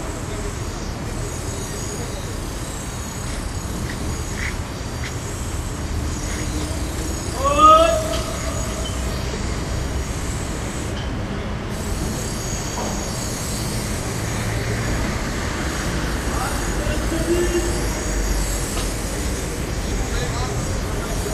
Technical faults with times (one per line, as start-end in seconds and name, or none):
none